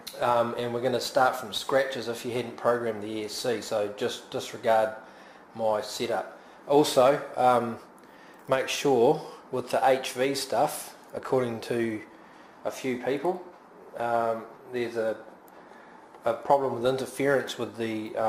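No technical fault can be heard anywhere in the audio. Nothing in it points to a problem in how it was captured, transmitted or played back.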